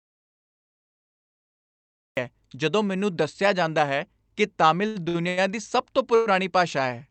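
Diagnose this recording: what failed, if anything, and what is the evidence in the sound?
Audio dropout to silence, from the start to 2.17 s: the clip opens in silence with no room tone, and the speech begins mid-flow. At the input or driver stage, the source was likely lost while the recorder kept writing silence.

Repeated stalls (stutter), 4.87 to 5.39 s: the speech catches four times, the longest hold about 89 ms, with roughly 237 ms of stretched sound filling nearly half that span. It is a network fault: the jitter buffer repeatedly ran dry and the receiver extended the last sound, so nothing is lost but the speech drags.

Call audio freeze, 6.15 to 6.28 s: a single 110 ms hold continues the last sound as a fading buzz or hiss and never reaches silence, then speech resumes where it stopped. At the network stage, packets were likely held up in transit and the jitter buffer ran empty, adding 110 ms of delay.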